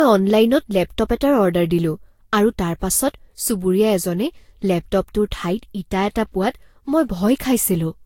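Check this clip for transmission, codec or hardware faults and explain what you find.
There is one codec fault, present throughout the speech. Generation loss, start to end: the sound is swirly, smeared and hollow, with blurred onsets and nothing above 16.6 kHz. This points to a lossy codec such as Vorbis near 64 kbit/s, likely re-encoded about four times, each pass adding fresh quantisation noise and spectral holes.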